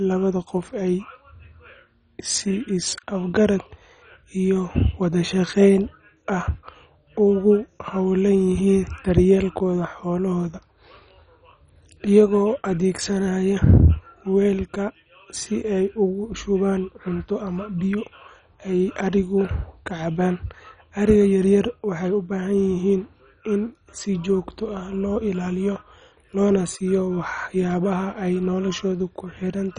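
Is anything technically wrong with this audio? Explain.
Yes. Throughout the speech, nothing sits above 10.3 kHz, and the dull, gurgling, granular texture points to heavy MP2 compression, likely at a starved bitrate near 32 kbps. Sub-bands switch on and off and are coarsely quantised, which separates this from a plain low-pass filter's clean dullness.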